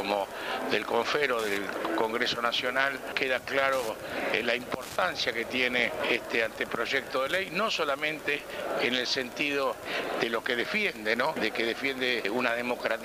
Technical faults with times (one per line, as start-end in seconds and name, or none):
0.00-13.04 Wi-Fi interference